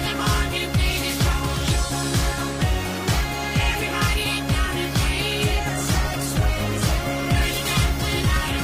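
At 5.71 s a call bitrate drop sets in and lasts to the end of the clip. The encoder appears to have been pushed from a comfortable rate down to very few bits, which fits a fall from around 64 kbps to about 15 kbps, bottoming out for roughly 2.48 s. The sound turns coarse, watery and muffled. On a spectrogram the upper band disappears as the rate falls after 5.71 s, leaving a hard ceiling, with smeared, blocky detail below it.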